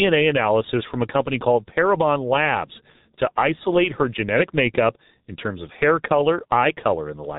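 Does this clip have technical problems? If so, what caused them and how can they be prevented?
Yes. G.723.1 codec damage throughout: nothing passes above 3.8 kHz, and the heavy, slow-updating model leaves the speech muffled and hoarse, fitting roughly 6 kbit/s. Prevent it by sending calls over a wideband, higher-bitrate codec instead.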